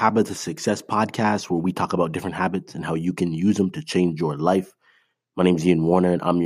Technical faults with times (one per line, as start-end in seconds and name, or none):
none